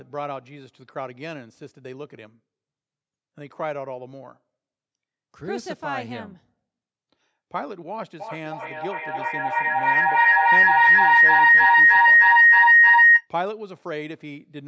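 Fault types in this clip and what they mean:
Feedback howl: a loop gaining level on every pass, so repeats swell rather than fade like echo, building into a tone near 2 kHz, with repeats roughly 300 ms apart.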